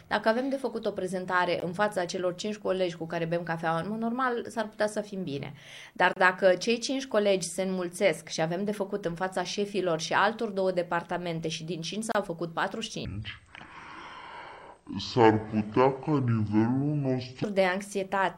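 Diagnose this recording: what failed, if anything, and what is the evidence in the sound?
Three gaps at a join of encoded pieces point to the codec stage: silences of 17.5 ms at 1.6 s, 30 ms at 6.13 to 6.16 s, and 32 ms at 12.12 to 12.15 s. Separately encoded pieces were joined with their start delay and end padding left in. Each shows as a thin vertical blank stripe on the spectrogram and a flat, slightly smeared notch in the waveform, with the sound resuming where it stopped.

A section at the wrong speed runs from 13.05 to 17.44 s at 0.52 times normal speed, so everything drops about ten semitones and drags. The likely cause is a playback or editing stage running to the wrong clock. On a spectrogram, harmonics compress downward and events stretch in time.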